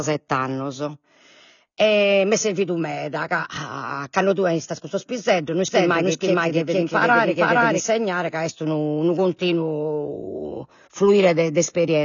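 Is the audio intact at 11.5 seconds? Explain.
No. Around 11.5 s, as throughout, the speech stops dead above 6.9 kHz and sounds dull and fizzy, likely AAC compression at a low bitrate, roughly 24 kbps, starving the upper spectrum.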